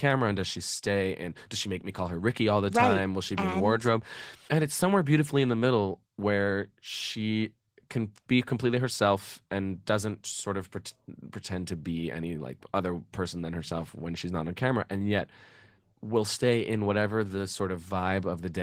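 The clip is speech, and Opus voice compression damages it throughout, plainly audible from start to finish. The band still reaches up toward full width. The lower part, below 8 kHz, sounds coarsely coded by a linear-prediction coder, giving a hoarse, slightly robotic edge. The top end above 8 kHz is carried by a CELT layer. This points to hybrid mode with 20 ms frames, at a bitrate around 16 kbps.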